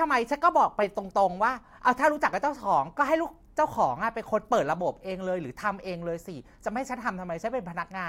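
Nothing in the speech stood out as a technical problem on listening.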